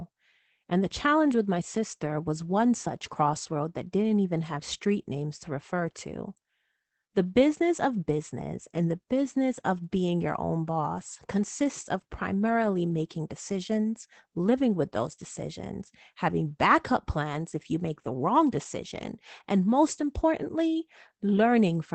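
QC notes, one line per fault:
throughout, Opus voice compression: the speech has plainly audible codec damage, with a grainy, coarse texture and no content above about 8.6 kHz, so the top of the sound is cut off. The character fits Opus running its SILK linear-prediction coder in wideband mode at a low rate, likely around 12 kbps. SILK models the vocal tract and codes the excitation signal with few bits, which produces the roughness, and the wideband setting limits the band to roughly 8 kHz.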